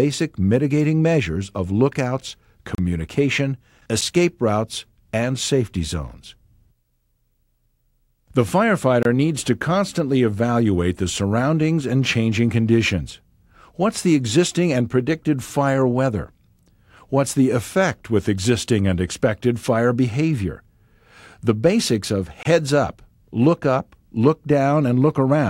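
The audio has three brief dropouts, each a gap at a join of encoded pieces. Silence opens at 2.75 s for about 34 ms, at 9.03 s for 24 ms, and at 22.43 s for 24 ms. Each edge is smeared. Sound resumes where it stopped. Separately encoded sections were joined untrimmed, keeping encoder delay and end padding.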